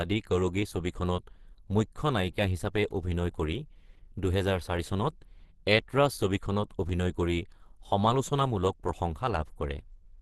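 Lossy coding at a low bitrate, likely Opus compression around 16 kbps in its hybrid speech mode, runs through the whole clip. Nothing survives above about 12.2 kHz, and the speech comes across muffled, hoarse and somewhat grainy, with plainly audible codec damage.

From 0.91 s to 9.88 s, periodic USB or driver dropouts occur roughly every 1.0 s, about ten in all. Each time a background task stalls the audio path, around 2 ms of speech is skipped outright, leaving a regular small tick or jump in the signal.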